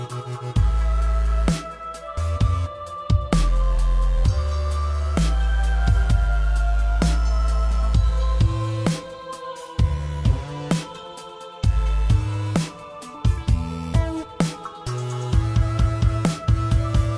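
No technical faults can be heard anywhere in this audio.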